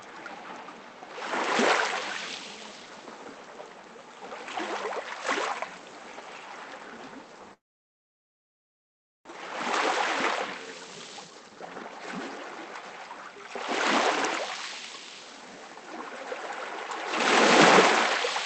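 From 7.53 to 9.31 s, a long network dropout, likely from packets never arriving, leaves the receiver concealing: a brief fading buzz, then about 1.7 s of silence, and about 1 s of sound is lost outright.

From 9.39 to 12.83 s, a jitter buffer speed-up trims tiny pitch-period slices to shed about 0.7 s of backlog, so the sound runs about 21% fast at unchanged pitch.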